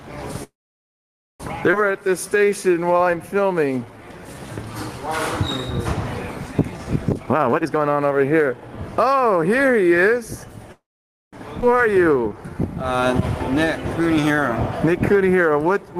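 Right at 0.43 s there's a call audio freeze running to 1.42 s. The last bit of sound gets stretched briefly, then it's basically silent for about 0.9 s. That's likely packets stalling and the jitter buffer running dry. When things resume, the audio carries on where it stopped, so nothing's lost, just a roughly one-second hole inserted. Then at 1.72–1.75 s there's a skip ahead: playback jumps forward, dropping something like 0.7 s of audio, with the two sides stitched almost directly together.

From 1.91 to 5.05 s you get a jitter buffer slow-down. The receiver repeats tiny pitch-period-sized chunks to rebuild its reserve, so things play at 89% speed with the pitch unchanged, adding 0.36 s. It does the same again at 89% from 6.47 to 6.86 s, adding 51 ms.

Then there's a jitter buffer speed-up from 7.09 to 9.14 s at 136%, trimming out around 0.7 s in small pieces. At that rate it sounds clearly rushed.

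The pattern repeats. Another freeze hits from 10.72 to 11.35 s, about 0.6 s inserted with roughly half a second near-silent. A skip at 11.61–11.64 s loses around 0.4 s. Finally, a long slow-down from 11.91 s to the end plays at 93% and adds 0.3 s.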